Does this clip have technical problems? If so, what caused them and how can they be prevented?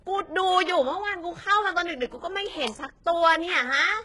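Yes. Throughout, s sounds turn gritty and lispy, with no content above 11.4 kHz. This is likely heavy HE-AAC compression, with treble rebuilt from copied lower bands, suggesting roughly 12 kbps. Encoding at a higher bitrate, or with plain AAC, prevents it.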